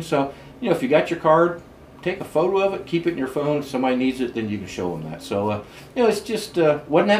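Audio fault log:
No fault to log in this audio.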